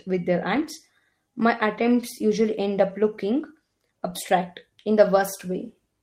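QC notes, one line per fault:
0.55–0.65 s, 4.09–4.11 s, 5.15–5.21 s: lost packet rebuilt from error correction. Each spot sounds briefly rougher and noisier, with no gap. Lost packets were replaced by low-bitrate copies carried in the next packet. The lengths, 60, 20 and 40 ms, fit three, one and two 20 ms packets.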